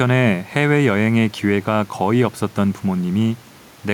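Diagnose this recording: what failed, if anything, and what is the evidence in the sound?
Nothing failed; every stage of this speech recording works.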